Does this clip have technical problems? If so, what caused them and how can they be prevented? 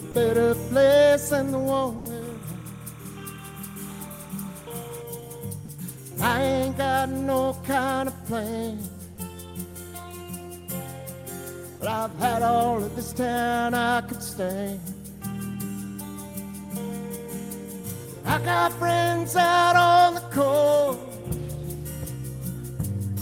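Yes. At 0.11–0.14 s, 1.98–2.05 s and 5.65–5.68 s, brief gaps of 30 to 70 ms fill with steady noise. They show as flat, low-level patches in the waveform. These are likely sound dropped by the voice detector in Opus DTX. Disabling DTX or lowering the detector's threshold prevents this.

From 2.22 to 5.02 s, timecode bleed adds a chirping warble about 25 dB down. It appears as bands near 1 kHz and 2 kHz switching at a 30-frame rhythm. Separating and shielding timecode cables and tracks prevents it.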